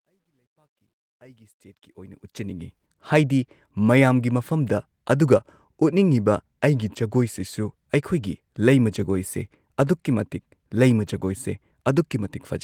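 A speech clip whose opening fade-in shows truncation distortion on a fade: the gain stage that ramps the level up from the start to full level at 2.86 s drops low bits without dither, which fits a word length of about 12 bits. At the quietest part, from 0.0 to 1.38 s, the waveform collapses into a few coarse steps, so the sound comes in gritty before smoothing out as the fade rises.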